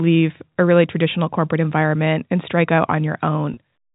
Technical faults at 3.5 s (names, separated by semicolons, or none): packet loss with pitch repetition